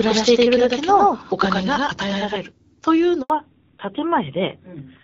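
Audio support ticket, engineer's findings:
Doubled audio track from the start to 2.36 s: an equally loud, dry copy trails about a tenth of a second behind, then cuts off abruptly. Likely a second capture path or misaligned edit.

Handover gap at 3.22 to 3.30 s: sound drops out for 80 ms, dying away fast. Network handover, no speech frames arriving during the switch.

Fallback to narrowband from 3.30 s to the end: nothing above 4 kHz, duller and rougher than the light HD Voice sound before. Points to AMR-WB at 12.65 kbit/s giving way to AMR-NB around 7.4 kbit/s.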